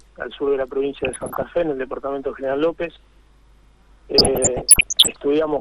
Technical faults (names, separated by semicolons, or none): MP2 compression; DAB burbling